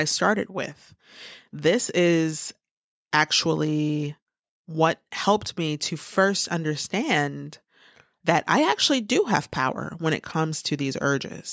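No technical faults can be heard: the speech has passed through the normal microphone processing of a call, which trims the lowest bass, and the audio carries nothing above 8 kHz.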